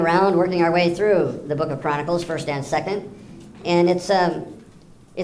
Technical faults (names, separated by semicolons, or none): wrong sample rate